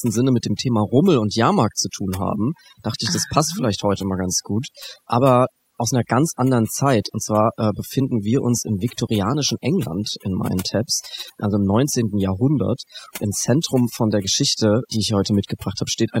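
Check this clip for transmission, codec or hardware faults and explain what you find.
One fault runs through the whole speech clip: overdone noise removal. The background drops away and breaks into twinkling, warbling specks, and quieter parts of the speech vanish with it. A noise reduction stage set too strong is cutting individual frequency bands far down or off whenever they sit near its noise estimate.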